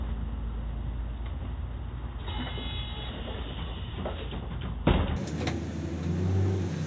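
From 5.16 s to the end, the sound suddenly runs twice as fast and jumps a full octave higher, 12 semitones, with pitch and tempo shifting together. This is a wrong sample rate: the audio is played back unconverted at double its recorded rate, which fits 8 kHz material being played at 16 kHz.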